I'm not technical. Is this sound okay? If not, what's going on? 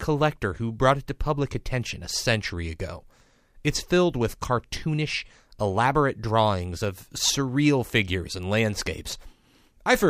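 Yes, this speech recording has no technical faults.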